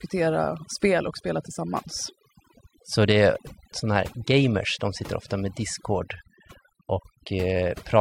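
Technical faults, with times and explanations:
Throughout, overdone noise removal: the noise reduction was set too aggressively for a noisy recording, so every frequency band whose level sat close to the estimated noise floor was pushed right down or switched off. The quieter parts of the speech fell below that threshold and were removed along with the noise, leaving the gaps between phrases quieter but speckled with twinkling fragments.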